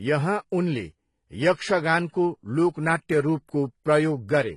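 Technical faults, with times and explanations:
Throughout, transcoding between lossy codecs: the speech stops sharply at 12 kHz, and smeared, synthetic-sounding highs sit under a second layer of swirly coding noise, likely from a low-rate HE-AAC encode re-encoded as AAC-LC. A spectrogram shows a flat 12 kHz ceiling with patchy, blocky upper bands.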